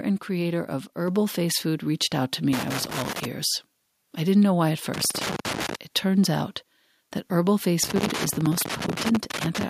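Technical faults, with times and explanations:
1.08 s, microphone volume stepped up: the input gain rises by about 3 dB in a single step, so the speech and the room noise behind it get louder together. On the waveform the envelope widens abruptly; a spectrogram brightens evenly across all frequencies.
2.53–3.25 s, 4.94–5.75 s, 7.84–9.63 s, loose connector crackle: an intermittent contact repeatedly breaks and restores the signal, and each make or break clicks. It is heard as irregular scratchy bursts over the speech. On the waveform there are dropouts and spikes; on a spectrogram there are scattered broadband vertical streaks.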